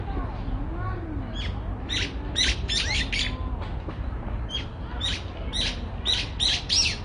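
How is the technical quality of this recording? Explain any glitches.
The technical quality is limited by one fault present for the whole duration. AAC compression artefacts run throughout: nothing is heard above 9.7 kHz, and the remaining content sounds dull and smeared with a warbling, fizzy texture. That is likely AAC-LC coding at a bitrate around 32 kbps, where the encoder drops the top band and quantises the rest coarsely against its hearing model.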